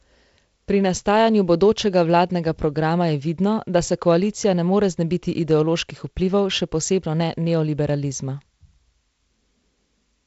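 No technical faults can be heard in the speech, which comes through G.722 wideband telephone coding with nothing above 7.7 kHz.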